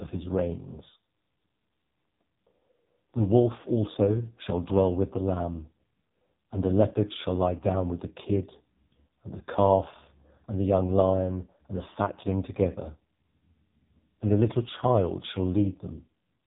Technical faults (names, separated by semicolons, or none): AMR narrowband mobile codec